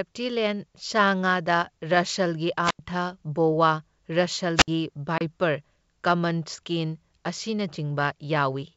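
Speech carried over G.722 wideband telephone coding, which sounds like its full 64 kbit/s mode with little audible codec damage, has two wireless microphone squelch dropouts, at 2.63 to 2.79 s and 4.56 to 4.68 s. In each, the radio link fades, hiss rises briefly, and the receiver's squelch then mutes the output for about 87 ms and about 62 ms before the signal returns. The swell of static ahead of the hole marks these as RF fades rather than network losses. At 5.18 to 5.22 s there is packet loss on an ADPCM call: about 30 ms, a few packets' worth, drops straight to silence with hard edges and no warning noise. Because the decoder's predictor and step size have lost track of the sender's, the speech comes back slightly distorted and settles within tens of milliseconds. That recovery disturbance after the hole is what identifies this fault.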